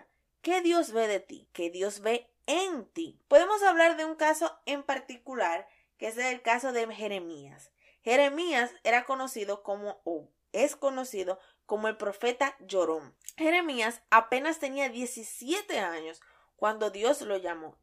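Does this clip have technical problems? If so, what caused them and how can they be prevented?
No, nothing in this speech clip stood out as a technical problem on listening, so there is nothing here to trace back or prevent.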